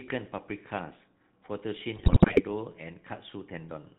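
GSM full-rate codec coding runs through the whole clip. The speech is rebuilt from a vocal-tract model driven by sparse, regularly spaced excitation pulses, with nothing above 4 kHz, giving a plainly buzzy, gravelly roughness consistent with the 13 kbps full-rate scheme.

GSM bit errors break in from 1.96 to 2.42 s. Corrupted filter, pitch and gain parameters reach the decoder frame after frame, so the spectrum bends and the level lurches, and the speech collapses into squawks, pops and gargling, pointing to a heavily errored link.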